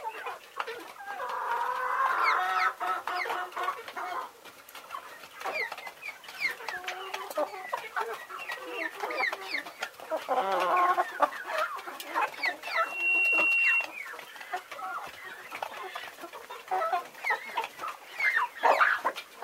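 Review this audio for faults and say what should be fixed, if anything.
Loudspeaker feedback squeal, 12.75 to 13.91 s: microphone re-amplifies the loudspeaker, so a 2.7 kHz tone swells in a third of a second, a single bright horizontal spectrogram line. To prevent it, keep the microphone away from the loudspeaker's path, lower the gain, or notch 2.7 kHz.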